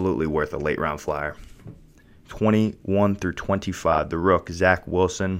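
At about 3.93 to 3.98 s there's a case of frames out of order: two adjacent blocks of roughly 26 ms each, which fits single codec frames, got decoded swapped. That short bit of speech plays with its halves exchanged, giving a quick garbled flutter.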